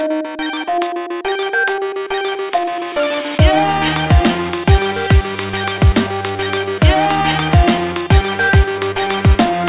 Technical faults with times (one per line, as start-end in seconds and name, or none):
none